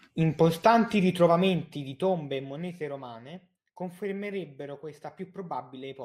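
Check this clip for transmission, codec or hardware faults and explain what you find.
One fault stands out in this speech clip. Zipper noise runs from 1.43 to 3.02 s: a fade of about 15 dB applied in unsmoothed 1 dB steps, roughly seven per second, each leaving a tiny click that produces an audible ticking over the sound.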